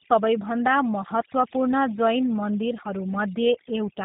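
From start to finish, overdone noise removal has been applied: the reduction was set so aggressively that frequency bands sitting near its noise estimate are pulled down or switched off, and quieter parts of the speech vanish with them. The background becomes near silence flecked with twinkling specks.

Throughout, the speech also passes through the G.729 codec, whose plainly audible damage fits an 8 kbit/s rate. The codec resynthesises the voice from a vocal tract filter and a few pulses per frame and discards everything above 3.8 kHz, leaving it muffled, slightly rough and synthetic.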